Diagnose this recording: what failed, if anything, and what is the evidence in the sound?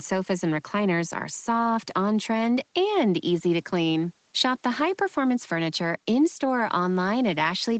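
No failures found in this speech recording.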